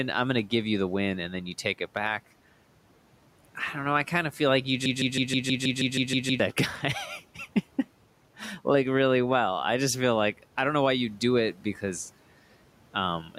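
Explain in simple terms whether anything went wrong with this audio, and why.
Two things go wrong in this speech recording.

From 4.86 to 6.40 seconds there is a broken-record loop. A tiny slice of sound, about 0.16 seconds long, plays over and over. It repeats ten times in a row, with no gap between copies. It sounds like a stuck CD. The likely cause is that the player or stream stalled and kept resending the last piece it had. Whatever should have been heard in those seconds is gone.

From 11.58 to 11.83 seconds there is speech cut by the noise suppressor. That is the tool meant to hide background hiss. It mistook part of the speech for noise and turned it down. Roughly a tenth of a second is affected. A soft sound or word ending there comes out swallowed and faint. The faint room noise underneath the speech is simply part of the recording.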